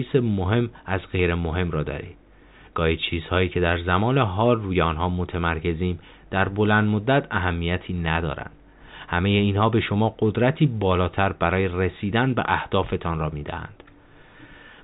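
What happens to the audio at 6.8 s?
Nothing goes wrong at 6.8 s: the speech carries on intact through that moment, with only the usual narrow telephone band of G.711 coding that cuts everything above about 3.8 kHz.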